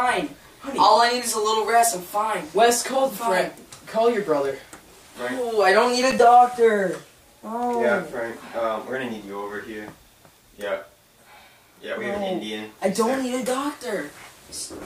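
Loose connector crackle runs from 6.11 to 6.20 s, a short irregular burst of scratchy crackle. A worn or dirty contact was making and breaking as it shifted, chopping the signal on and off, with any DC on the line turning each break into a pop.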